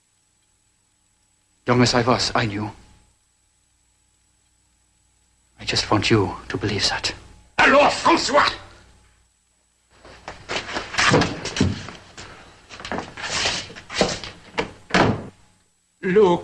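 No technical faults can be heard in the audio, so there are none to describe in time order.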